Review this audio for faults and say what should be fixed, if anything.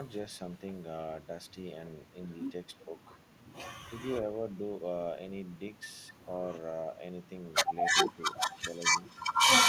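The speech briefly dips at 2.85–2.95 s by about 5 dB, then more deeply at 8.15–8.52 s, by about 10 dB. This is likely speech suppressed in double talk: with both sides talking, the echo canceller mistook the talker for loudspeaker echo and attenuated it. Tuning the double-talk detector to hold full gain while the near-end talker is active would prevent this.

A faint delayed copy of the voice appears at 8.50–8.59 s, trailing by 378 ms and sitting about 25 dB below the speech. This is likely echo leak: the far end's loudspeaker sound reached its microphone, and its echo canceller didn't fully remove it. Better acoustic separation or a longer, faster-converging echo-canceller filter at that end would prevent it.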